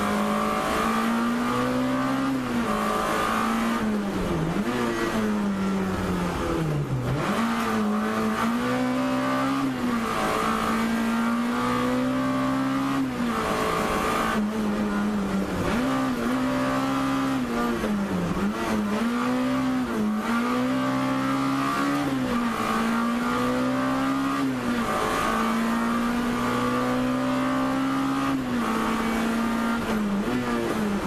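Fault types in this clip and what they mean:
No fault was heard anywhere in the clip on listening.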